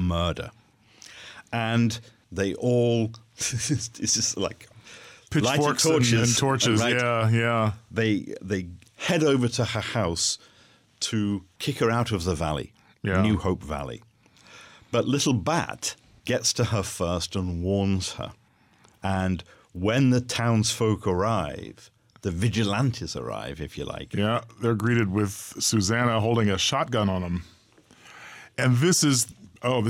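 No technical faults are audible anywhere in the recording.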